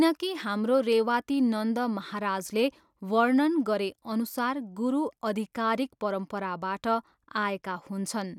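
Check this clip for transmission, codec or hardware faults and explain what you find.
No faults turn up when checking this clip.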